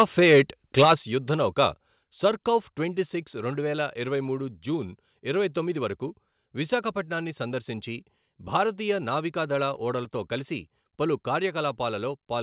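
Microphone overload runs from 0.0 to 0.41 s and again from 0.79 to 0.93 s, just before "యుద్ధ నౌక". Peaks sit about 6 dB past full scale and the tops are flattened, giving a harsh crackle. The likely cause is excessive microphone input gain. The microphone volume is then stepped down at 1.02 s (about −6 dB), at 2.04 s between "యుద్ధ నౌక" and "సర్కౌఫ్ ట్వంటీ సిక్స్ రెండువేల" (about −3 dB), and at 3.06 s between "సర్కౌఫ్ ట్వంటీ" and "సిక్స్ రెండువేల ఇరవై మూడు" (about −2 dB). Each is an abrupt level drop, likely automatic gain reduction responding to the clipping. The audio stops at 4 kHz, which fits a G.711 call path.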